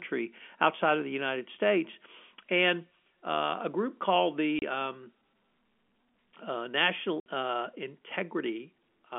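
Right after "uh a group called", at 4.59 s, the audio drops out for 30 ms, a gap that fits a single lost packet. A second hole follows from 7.20 to 7.26 s, 60 ms, which points to two packets in a row. That's packet loss filled with silence: the receiver just played nothing where the data was missing, so each gap starts and ends with a hard edge, heard through the narrow 250 Hz to 3.4 kHz phone band of the G.711 line.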